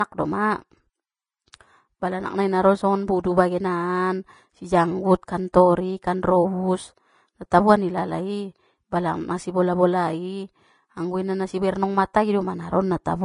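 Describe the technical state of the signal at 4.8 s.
At 4.8 s you're hearing the same thing that runs through the whole speech clip: low-bitrate audio saved at a high bitrate. Nothing comes through above about 10.6 kHz, and the top end has that thin, coded quality. The likely story is an earlier low-bitrate encode, perhaps around 30 kbit/s, that stripped the highs, then a re-save as a roomy MP3. The bigger file can't bring back what the first pass threw away.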